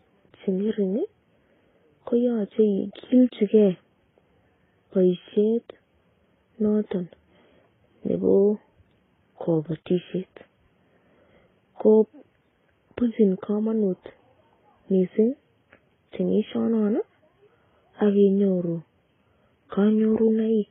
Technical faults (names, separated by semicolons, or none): transcoding between lossy codecs